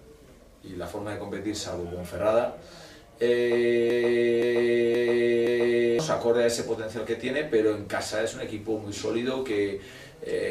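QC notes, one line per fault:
3.90–5.99 s, broken-record loop: a 0.52 s fragment repeats exactly four times back to back, losing the audio due then, likely a stalled player or stream resending its last buffer. Waveform and spectrogram show four identical blocks tiled edge to edge.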